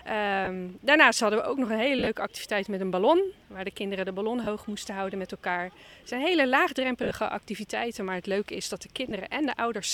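The sound has brief dropouts from lost LE Audio frames at 0.45–0.47, 1.99–2.07, 4.44–4.47, 7.03–7.11 and 9.09–9.11 s. The decoder fills each gap with the last spectrum, signs randomised, so tones smear into noise. The two longer gaps are scattered over about 80 ms.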